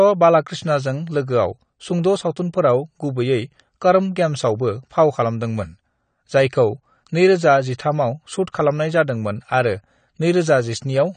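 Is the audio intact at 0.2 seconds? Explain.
No. At 0.2 seconds, as throughout the whole clip, the speech sounds dull and smeared, with a warbling, fizzy texture on sibilants and sustained sounds, and nothing is heard above 9 kHz. This is likely AAC compression: the AAC-LC encoder quantises each frame's frequency lines harshly, drops the top of the spectrum and leaves holes or substitute noise in bands, damage which fits a low bitrate around 32 kbps.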